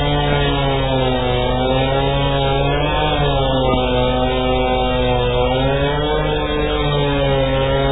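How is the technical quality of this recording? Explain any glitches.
The technical quality is poor, with heavy codec damage throughout and two loud pop events.

MP3 compression runs through the whole clip. Nothing is heard above 3.8 kHz, and the remaining sound has a watery, swirling texture. This is likely a very low bitrate encoder, around 8 kbps, discarding treble and weak frequency detail frame by frame.

A loud pop lands at 0.33 to 0.35 s, about 10 dB above the surrounding sound, and a double pop follows at 3.52 to 3.76 s, about 15 dB above it. Each is likely a sudden voltage pulse added to the signal, heard as a sharp crack over the continuing sound.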